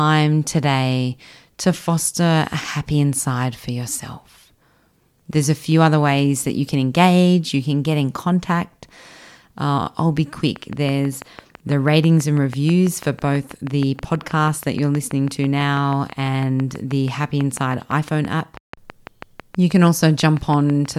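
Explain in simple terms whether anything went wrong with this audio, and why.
A train of clicks runs from 10.56 s to 20.86 s: about 70 steady ticks, six per second, most likely from electrical interference or a faulty connection or power supply.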